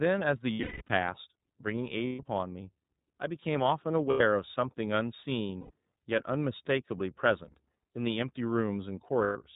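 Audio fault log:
Throughout: iLBC codec. The speech is band-limited, with nothing above 4 kHz. It sounds slightly rough and synthetic. Each 30 ms frame's excitation is coded on its own, and the damage is plainly audible. The rate of about 13.3 kbps fits iLBC's 30 ms mode.
0.54–0.90 s, 2.07–2.20 s, 4.10–4.21 s, 5.60–5.71 s, 9.24–9.37 s: lost iLBC frames. Each gap becomes a held, slightly buzzy vowel. The decoder repeats the last pitch cycle mixed with noise. The first gap loses 270 ms across 360 ms, with one run of about 200 ms. The others last 90 to 120 ms. Because each frame stands alone, the voice returns cleanly right after each gap.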